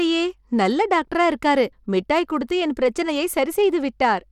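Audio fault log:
throughout, Bluetooth SBC compression: The speech carries a gritty, grainy edge, and the top end thins and flickers instead of holding steady, with nothing at all above 17.4 kHz. The likely cause is SBC coding at a starved bit pool, which fits a rate of around 96 kbps. The codec splits the signal into a few wide sub-bands and starves the weakest upper ones of bits, so treble drops in and out while coarse quantisation leaves audible grit and aliasing.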